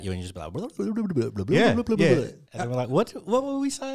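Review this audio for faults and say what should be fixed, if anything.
No faults; nothing needs fixing.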